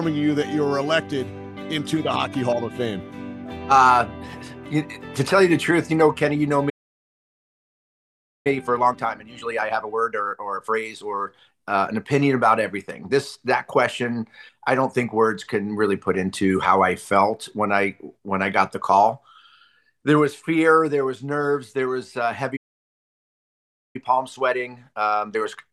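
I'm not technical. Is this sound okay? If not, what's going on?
No. There are two problems, and each happens twice.

The first is a playback stall. At 6.69 s the sound stops dead for about 1.8 s and comes back at 8.47 s. It happens again at 22.56 s, with a gap of about 1.4 s until 23.96 s. The cause is likely that the player ran out of incoming data, or got held up, and had nothing to play until it recovered.

The second is time-compressed catch-up. Straight after each gap, the player hurries to make up lost time. It snips out tiny pieces and blends the rest together. Pitch stays normal, but things move faster. From 8.47 s to 11.47 s it runs at 1.25 times normal speed. From 23.96 s to the end it runs at 1.15 times.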